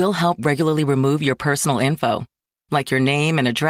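No technical faults can be heard anywhere in this recording.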